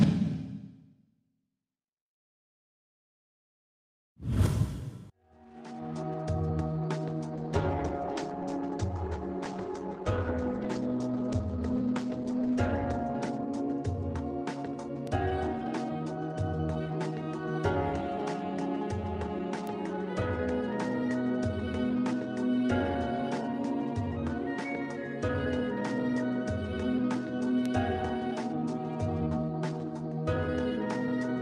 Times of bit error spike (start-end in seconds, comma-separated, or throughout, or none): 15.07, 19.67, 27.66